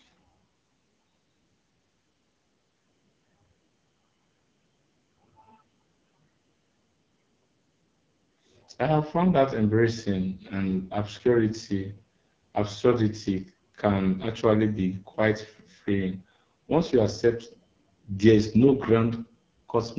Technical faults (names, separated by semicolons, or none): AMR wideband (HD Voice) codec